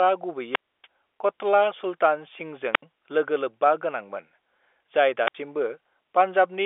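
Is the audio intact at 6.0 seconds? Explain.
Yes, the audio is intact at 6.0 seconds, with only the expected narrow telephone band of G.711 coding and nothing above about 3.7 kHz.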